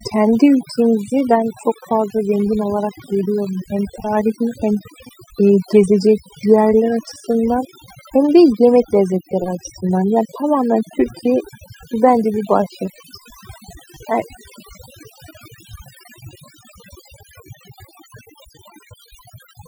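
Overdone noise removal affects the speech from start to finish. A noise reduction stage was pushed too hard, so any frequency band sitting close to its noise estimate is pulled almost to silence, taking the softer parts of the voice along with the noise. Between phrases the background drops to near silence dotted with twinkling specks. On a spectrogram the quiet regions show a black floor sprinkled with isolated bright dots.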